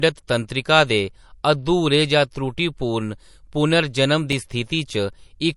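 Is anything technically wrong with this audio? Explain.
Yes, there are two faults. Throughout the speech, the audio stops dead at about 11.3 kHz, and the sound is watery and swirling, with smeared onsets. That likely comes from MP3 compression at a low bitrate, around 48 kbps: the encoder discards the top band and zeroes weak frequency lines that flicker between frames.

From 4.32 to 5.09 s there are CD scratch ticks. A blemish on the disc corrupted more data than error correction could rebuild once per revolution, so the player patched or muted those samples. The result is five brief regular clicks, each a few milliseconds at most.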